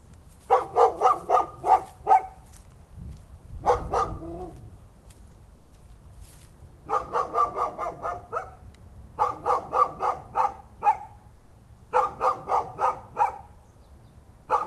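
An everyday-sound recording, carried over a call path whose top end stops near 12 kHz, twice has its background swapped for comfort noise, at 5.55–5.71 s and 11.35–11.51 s, 160 ms each. The textured ambience gives way to a flat, featureless hiss, about 2 dB and about 5 dB quieter. This is likely Opus DTX, with the receiver synthesising noise while transmission pauses. A noise gate or dropout would leave silence; here a steady hiss remains.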